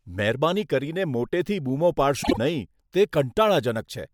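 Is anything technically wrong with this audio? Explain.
Yes. The speech clip has one fault: frames out of order, from 2.23 to 2.38 s, right after "મોટેથી બૂમો". Two neighbouring blocks of about 48 ms each, which fits runs of two codec frames, were decoded in swapped order. The later piece plays before the earlier one, and no time is lost. It sounds like a brief garbled flutter. On a spectrogram, formant tracks jump backward with thin vertical lines at the seams. The waveform shows abrupt envelope steps there.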